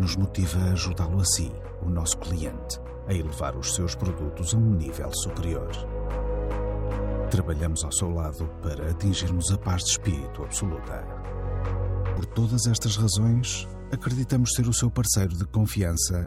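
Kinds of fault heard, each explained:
No technical faults can be heard anywhere in it.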